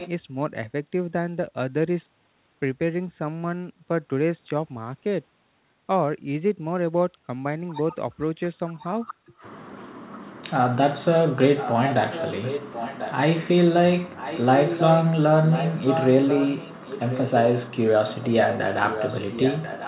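A far-end echo canceller likely let part of its loudspeaker pickup through, so this speech clip carries a delayed copy of itself, trailing about 1.04 s behind. It surfaces in brief scraps at 0.0–0.09 s (roughly 15 dB under the speech) and 8.77–8.84 s (barely audible, around 30 dB down), then as longer, louder stretches about 10 dB down at 11.57–13.14 s, 14.16–15.09 s, 15.5–17.3 s and from 18.1 s to the end. The audio is band-limited with nothing above 4 kHz, which fits the G.711 mu-law call path.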